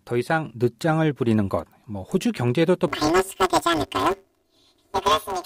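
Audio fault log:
2.88 to 5.46 s, planar audio read as interleaved: the speech turns into a robotic buzz near 172 Hz that runs to the end of the clip. Each block stores all left samples followed by all right ones, but the player takes them as alternating pairs, so every block plays twice at double speed, left copy then right. The blocks last about 5.8 ms, which fits a 256-sample block, so the repetition is heard as buzz rather than an octave jump.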